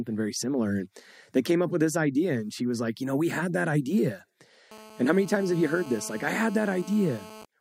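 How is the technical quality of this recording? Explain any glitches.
Two interference faults from a nearby 2G phone are audible in the last three seconds.

From 4.71 s to 7.44 s, right after "we had that idea", a GSM phone buzz sits under the speech. The phone transmits in bursts at 217 Hz during a call, and the audio circuitry rectifies those radio pulses. The result is a steady, hard, raspy buzz rich in harmonics, about 19 dB below the speech.

At 7.45 s, GSM signalling bursts appear as the phone sends a short cluster of bursts while its user is silent in the call. The circuitry rectifies these too, producing a brief tick with a 217 Hz buzz character at roughly 20 dB below the speech.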